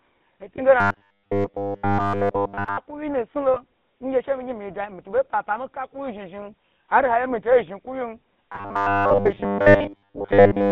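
The whole speech clip has passed through the GSM full-rate codec. Nothing sits below 150 Hz or above 3.7 kHz, so a spectrogram shows a hard-edged band with empty space above it. The codec rebuilds the voice from a vocal-tract model driven by sparse pulses, which fits the 13 kbps full-rate coder. The result is a plainly audible buzzy, gravelly roughness, and the harmonics look smeared and grainy rather than cleanly striated.

From 0.56 to 0.61 s there is a brief lost GSM frame, consistent with a single 20 ms frame going missing. The decoder fills the gap by reusing the previous frame's settings. You hear a short metallic ring. A waveform shows a small hold, and the spectrogram shows a frozen vertical slice instead of moving formants.

From 0.80 to 2.78 s the voice becomes a rigid, metallic drone at 100 Hz. It still tracks the speech roughly. This is robotic sound from repeated short buffers, likely caused by the playback side looping the last 10 ms whenever fresh audio is late, so most of the real signal in this stretch is skipped. 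On a spectrogram it appears as evenly spaced horizontal lines at multiples of 100 Hz. The waveform shows an identical 10 ms shape repeating.

At 3.54 s a second single-frame GSM loss produces the same brief metallic ring and frozen spectral slice. From 8.49 to 10.71 s the 100 Hz repeated-buffer buzz returns and continues almost to the end of the clip, with the same comb of harmonic lines.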